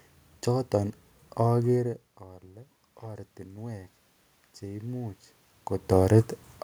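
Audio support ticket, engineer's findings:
Automatic gain rising, 1.8 to 3.99 s: level climbs gradually by about 5 dB after the input dropped about 17 dB. AGC in the capture chain. Distinguished from the talker moving (around 1.5 s) because the room noise swells along with the voice.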